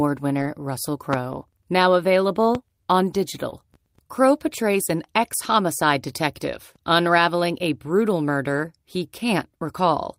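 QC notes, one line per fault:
1.13–1.16 s and 2.55–2.58 s, loud pop: two sharp single pops over the speech, roughly 15 dB then 10 dB above it, likely a voltage spike from a plug, switch or static.
3.52–3.54 s, lost packet rebuilt from error correction: no gap, but a 20 ms stretch turns briefly rough and grainy where the decoder filled in from the next packet's low-bitrate backup copy.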